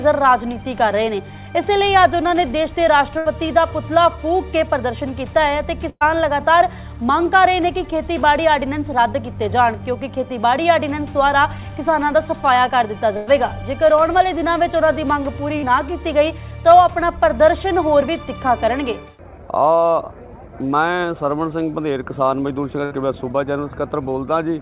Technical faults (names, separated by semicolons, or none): burst of packet loss; short concealed packet loss